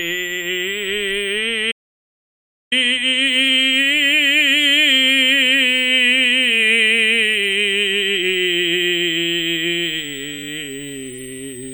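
Switching supply whistle, throughout: a power converter's whine sits under the music as a high tone wandering between 6.8 and 8.7 kHz, mostly around 7 kHz, roughly 20 dB down.

Audio dropout to silence, 1.72 to 2.72 s: the music cuts to silence for one second with no background left, likely because the input link dropped while recording continued writing silence.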